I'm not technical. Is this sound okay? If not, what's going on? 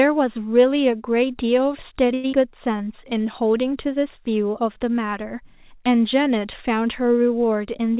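No. At 2.14 to 2.26 s there is a short stall from a late packet. The sound is held for about a tenth of a second, then carries on. Nothing is lost, which sets it apart from the next fault.

Right after, at 2.32 to 2.35 s, there is a skip ahead. A tiny piece of audio, roughly 70 ms, is dropped and the sound jumps forward. Unlike the stall, something is actually missing here.

From 2.77 to 3.45 s there is a jitter buffer slow-down. The speech drags to about 92% speed while staying at its normal pitch. It is a gradual stretch rather than one frozen moment.

All of this came through a phone-style call connection, which is why nothing above 4 kHz comes through and it sounds a bit muffled.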